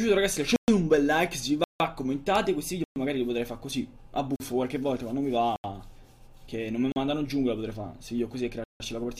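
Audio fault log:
0.56–8.8 s, block of digital silence: seven clean dropouts at 0.56 s (120 ms), 1.64 s (160 ms), 2.84 s (120 ms), 4.36 s (40 ms), 5.56 s (80 ms), 6.92 s (40 ms) and 8.64 s (160 ms). Every one is a whole multiple of 40 ms, which points to the output buffer missing its deadline and getting zeros instead. The audio snaps off and back with no fade. The 40 ms ones and the longer ones are heard as short holes.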